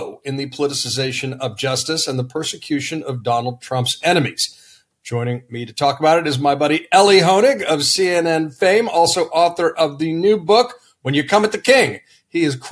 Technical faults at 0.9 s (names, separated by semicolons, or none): none